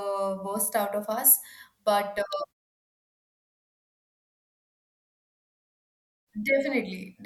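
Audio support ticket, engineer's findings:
Electrical switching spike at 2.33 s: one sharp snap riding over the speech, likely a nearby switch or relay arcing into the line; silences between phrases gate down cleanly.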